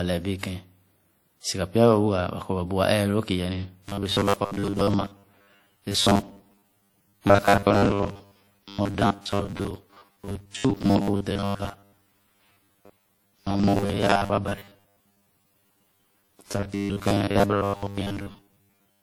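From the start, the speech carries the artefacts of a low-bitrate encode, even though the file itself is a high-rate MP3 with content reaching about 20.1 kHz. This is low-bitrate audio saved at a high bitrate, likely a WMA stream around 48 kbit/s re-encoded to MP3 at 192 kbit/s, which cannot restore the detail the first codec threw away.

From 3.81 s to 19.03 s the speech turns into a rigid, metallic buzz pitched at 100 Hz that only loosely tracks the words. This is robotic sound from repeated short buffers: audio likely arrived too slowly, so roughly 10 ms chunks were replayed in place of most of the real signal, imposing a buzz at one over that length.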